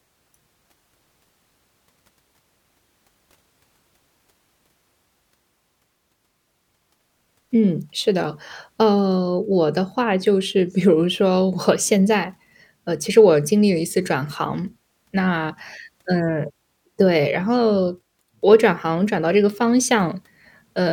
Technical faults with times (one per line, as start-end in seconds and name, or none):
none